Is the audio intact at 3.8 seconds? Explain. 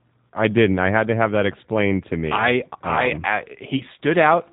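No. VoIP packet loss concealed by the speech codec affects 3.77 to 3.83 s, just after "I I um I". About 30 ms of audio went missing, which fits a single lost packet. The G.729 decoder filled the gap by repeating its last pitch and vocal tract filter at falling gain, so the sound there becomes a brief buzzy tone or coloured noise that fades. Because each frame depends on the previous one, the speech stays weak or distorted for tens of milliseconds or more past the gap before recovering.

The G.729 codec is also plainly audible at this moment. Working at 8 kbit/s, it rebuilds speech from a filter, a pitch predictor and a few pulses per frame, and it passes nothing above 4 kHz, so the speech sounds rough, synthetic and dull.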